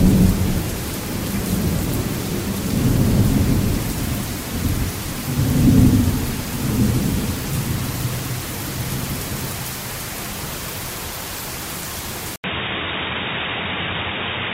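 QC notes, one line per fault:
12.36–14.54 s, input switched to a poorer device: after an 80 ms gap the sound turns dull and boxy, with nothing above 3.8 kHz, a level shift of around 5 dB and a new noise floor roughly 30 dB down, likely from recording moving to another, narrower-band input.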